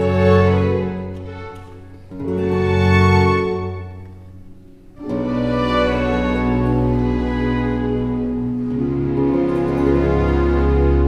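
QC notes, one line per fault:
Nothing here calls for a note, since no faults turn up anywhere in this clip.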